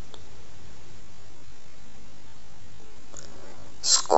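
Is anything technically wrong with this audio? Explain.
Yes. From 0.98 s right through to the end there's a time-stretched section. The speech abruptly slows to half speed while its pitch stays put, so it drags. That's likely software stretching the audio by repeating short slices to pad it out.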